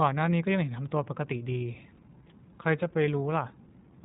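From start to finish the speech has the sound of the iLBC codec. Everything above about 3.8 kHz is simply gone, so sibilants go dull and the whole thing sits in that narrow phone-line band. Each short frame's excitation gets coded on its own, without borrowing from the previous one, and you can plainly hear the result as a rough, slightly synthetic grain on the voice. The texture fits 20 ms frames at the 15.2 kbps mode.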